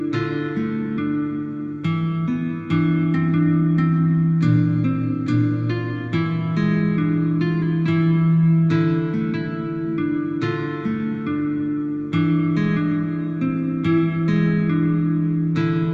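There are no technical faults to describe at any point in the audio.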